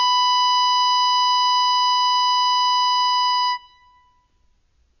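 AAC compression runs throughout the music, and the damage is plainly audible. Nothing survives above about 6.8 kHz, so the top of the mix is missing and everything sounds dull. The likely cause is an AAC-LC encode at a bitrate as low as 24 kbps, where the codec lowers its bandwidth and quantises each frame's spectrum so coarsely that sustained tones warble and smear, and bright textures turn fizzy.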